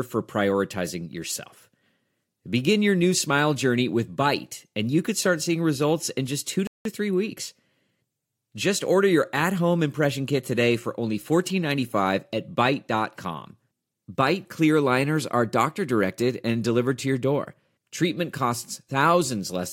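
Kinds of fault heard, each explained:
Playback stall: the speech cuts to silence for about 182 ms at 6.67 s, then resumes, likely because the player ran short of data or was blocked.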